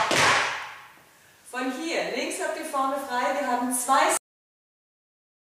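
The audio has a cut-off end. At 4.17 s it stops mid-sound and drops straight to digital silence with no decay. The final buffers were never written or played.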